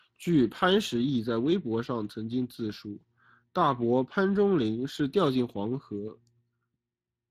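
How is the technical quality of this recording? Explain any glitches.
The recording is compromised throughout by Speex codec damage. Across the whole speech clip, the coder spends too few bits on the excitation signal, so the voice sounds noisy and hoarse. The damage is plainly audible and points to roughly 22 kbps. Nothing remains above 15.5 kHz.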